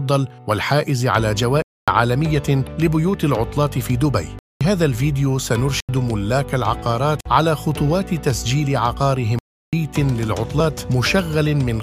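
Five times, runs of samples were zeroed, leaving a block of digital silence at 1.62–1.88 s, 4.39–4.61 s, 5.80–5.89 s, 7.21–7.25 s and 9.39–9.73 s. Each cut has no fade. The holes, 47 to 341 ms long, sound like abrupt dropouts, and two fit 4096- and 16384-sample blocks at 48 kHz.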